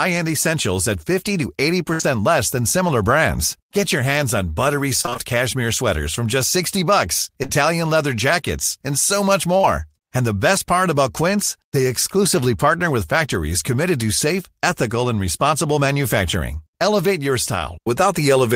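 At 1.93 s, just before "less than similar brands", there is a burst of packet loss lasting about 80 ms up to 2.01 s. Roughly 60 ms of the speech never arrived. The receiver bridged that stretch by extending the last received sound and attenuating it across the gap, so the speech turns into a sustained, decaying buzz or hiss. When real audio returns, the 60 ms in between is gone.

Directly after, from 2.01 to 2.05 s, comes a short concealed packet loss. About 20 ms was lost, and around 16 ms of synthesized signal covers it, continuing the preceding pitch or noise shape before crossfading into the decoded speech. Stacked on the burst, it lengthens the smeared transition into "less than similar brands" and can clip the start of that phrase.

Between 5.01 and 9.65 s there are scattered short gaps, about ten isolated losses spread across the span. The longest is around 30 ms. In total roughly 180 ms of audio is missing, about 150 ms is patched with extrapolated signal, and some 14 ms of extra material is inserted. 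Concealment covers only about 4 % of the span, so the speech stays intelligible but carries intermittent ticks, brief smears and small hiccups in the flow.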